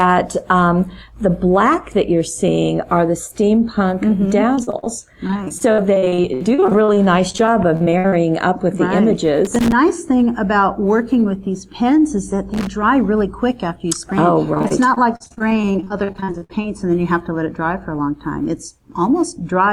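From 4.55 to 4.88 s, and again from 5.28 to 8.14 s, the sound breaks into repeated packet loss with a robotic sound. Each hole, up to about 66 ms long, is patched by stretching the preceding sound, so roughly 27 to 38 percent of each stretch is filled-in material. The result is a stuttering chop. Unlike crackle, it has no added noise, just missing and smeared pieces in steady succession.

At 9.45 to 9.72 s and 12.54 to 12.67 s, a loose connector crackle appears. A contact is rapidly making and breaking, chopping the signal. It is heard as an irregular scratch or crackle laid over the sound, which sets it apart from the packet loss's smooth, repetitive fill.

From 14.54 to 16.66 s, repeated packet loss returns, with gaps up to about 61 ms and a similar robotic, choppy quality.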